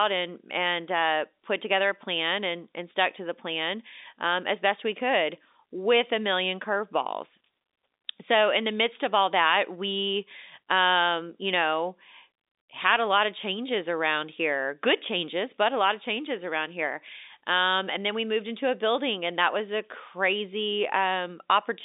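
No faults can be heard in the speech, which carries the sound of G.711 telephone coding with a line band of roughly 250 Hz to 3.7 kHz and nothing above 3.8 kHz.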